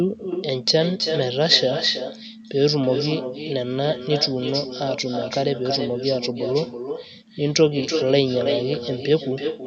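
Echo with no canceller runs throughout: the far end's loudspeaker feeds its microphone, so each phrase returns roughly a third of a second later, about 7 dB quieter and thinner.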